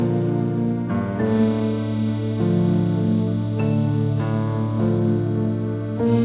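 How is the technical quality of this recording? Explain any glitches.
No glitches are audible.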